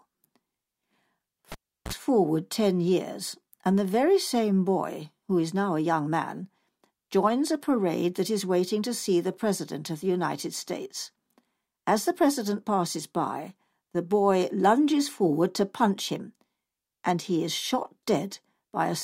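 A speech recording with a cable pulled and plugged in between 1.52 and 1.93 s: a pop, about 360 ms of near silence, then roughly 47 ms of 60 Hz mains buzz as the plug tip makes contact, and a second pop as the signal returns.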